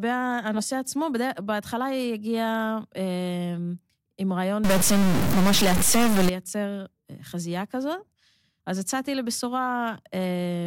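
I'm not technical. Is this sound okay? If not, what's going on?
No. From 4.64 to 6.29 s the speech turns harsh and buzzy, and the gaps between sounds fill with a fairly loud hiss. This is a stuck bit, likely a broken connection inside the recorder that jammed one digit of the numbers describing the sound.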